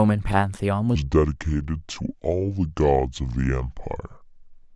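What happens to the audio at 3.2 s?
At 3.2 s you're inside a section at the wrong speed, running from 0.95 s to the end. The speech plays at about 0.67 times its proper rate, so it drags and drops roughly seven semitones, deep and sluggish, most likely from playback against the wrong clock.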